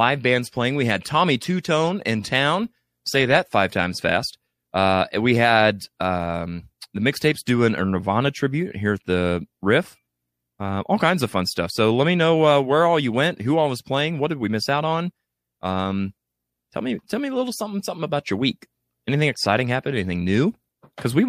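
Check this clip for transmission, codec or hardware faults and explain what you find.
Nothing stood out on listening to this speech recording; no transmission, codec or hardware problem could be heard anywhere in it.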